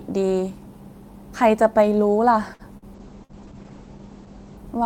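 It's a speech clip with a cluster of network trouble. At 2.53 to 2.62 s there's a short stall from a late packet: the jitter buffer ran dry and the receiver stretched the last sound for about 60 ms, then picked up where it left off. Two bursts of packet loss follow, at 2.77 to 2.85 s and 3.24 to 3.42 s. Each time the concealment holds and fades the previous sound, then jumps ahead with about 60 ms gone. From 3.0 to 4.69 s a call bitrate drop makes everything rough and muffled as the top end falls from 20 kHz to 8 kHz, which points to the encoder going from around 32 kbps to about 10 kbps.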